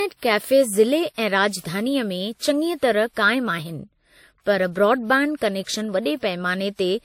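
A speech recording that carries two layers of compression artefacts from start to finish, with nothing above 16.6 kHz. The artefacts of one codec sit under the different artefacts of another, which is the signature of transcoding between lossy codecs, likely a WMA encode at around 64 kbit/s re-encoded to MP3 at a similar rate. The second encoder spends its bits reproducing the first one's damage, and the lower cut-off survives the chain.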